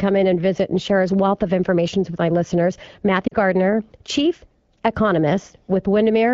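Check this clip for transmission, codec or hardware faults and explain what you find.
One transmission fault is audible, on top of the light coding of the AMR wideband (HD Voice) codec at 12.65 kbit/s.

Lost AMR speech frames, 3.27 to 3.34 s, right after "information with my listeners": for about 40 ms, which fits two 20 ms frames, the decoder repeats the last good pitch and vocal tract settings at falling gain. The speech briefly fades to near silence, then returns weak.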